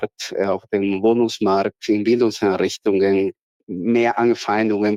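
No technical faults can be heard anywhere in the audio.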